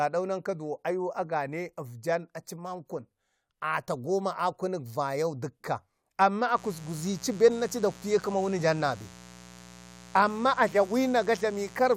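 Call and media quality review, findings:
Mains buzz, 6.52 s to end. Steady raspy 60 Hz buzz, roughly 20 dB below speech. Probable unshielded line or rectifier injecting switching spikes twice per cycle.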